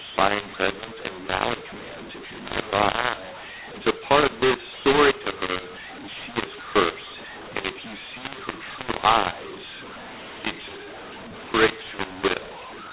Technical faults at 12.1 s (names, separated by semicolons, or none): mu-law and A-law mixed up